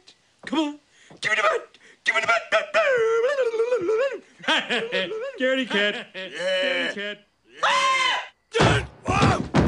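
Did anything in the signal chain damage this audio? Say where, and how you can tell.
Yes. From 4.74 s to 8.18 s there is a doubled audio track: a full-band copy trails the original by about one second, roughly 10 dB quieter, with no decay or room colour. It likely comes from a second, slower capture path or an editing overlap. A spectrogram shows the same patterns repeated, fainter, a second later, with abrupt edges at both ends.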